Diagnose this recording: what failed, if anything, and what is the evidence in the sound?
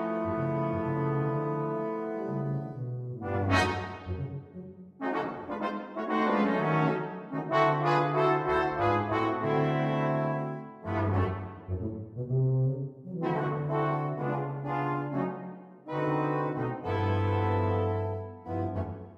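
Nothing in the signal chain audibly failed: the recording holds continuity throughout, with no dropouts, discontinuities or other audible breakdown at any stage.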